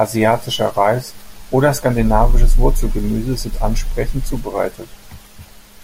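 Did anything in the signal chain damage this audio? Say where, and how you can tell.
No, nothing in the chain, from capture through to playback, has left any audible damage on this speech.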